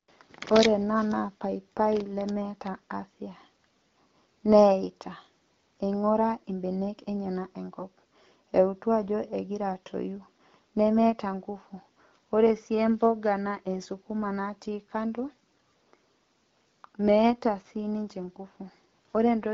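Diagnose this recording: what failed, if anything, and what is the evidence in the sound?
Nothing has failed: the speech arrives through an AMR wideband (HD Voice) path whose sound fits the 12.65 kbit/s mode, carrying only the light coding texture expected at that rate.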